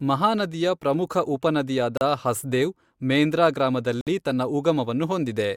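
At 1.97 s and again at 4.01 s, a gap between stream segments opens: the timestamps of consecutive 2-second segments don't meet, and the player pads the hole with silence. The speech stops dead for about 37 ms, then for about 58 ms ending at 4.07 s, each dropout with abrupt edges, falling at the 2-second boundaries. Nothing is missing from the speech itself; the silence is inserted, so the clip simply runs slightly longer.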